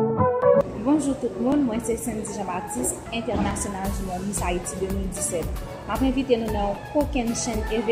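Regular clicks recur every 1.98 s between 1.52 and 7.47 s, about four in all, likely clock drift buffer slips, which fit roughly 70-sample jumps from a clock mismatch near 700 ppm.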